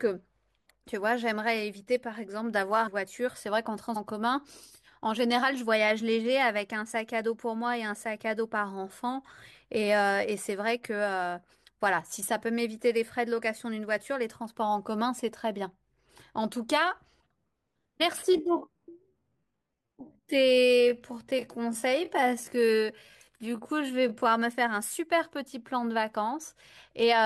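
Speech clip with two faults. Compressed frames skipped at 2.86 to 2.88 s and at 3.95 s: about half a second, then roughly a third of a second, of audio vanishes in jumps that fit 23.2 ms codec frames. Time-stretched section from 18.25 to 24.25 s: the speech slows abruptly to 0.658 times its pace with unchanged pitch, likely from software repeating short pieces to lengthen it.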